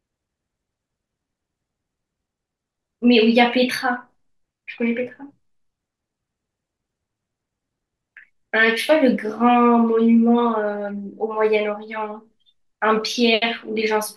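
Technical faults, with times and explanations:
No technical faults heard.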